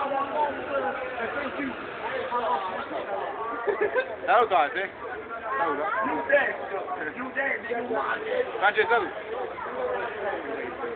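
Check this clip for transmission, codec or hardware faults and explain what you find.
No transmission, codec or hardware faults can be heard anywhere in the clip. There is nothing to flag.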